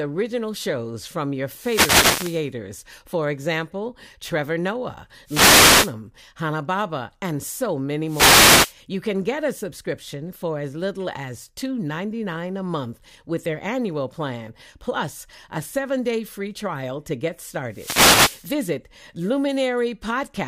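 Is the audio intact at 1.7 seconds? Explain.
No. At 1.7 s the speech is inside a wireless microphone noise hit running from 1.47 to 2.50 s, just after "shows from your". The FM radio link fades as reflected signals cancel. Receiver noise then rises, heard as a burst of static.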